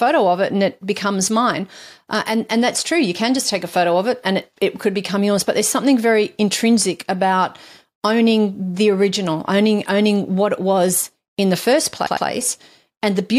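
Repeated frames occur from 12.06 to 12.27 s, right after "was in the first". A short block of compressed audio, about 104.5 ms long and consistent with a run of four frames, was delivered more than once. The decoder played it two extra times, so the same fragment of speech sounds three times in a row as a stutter. The repeats stretch the clip by 209 ms.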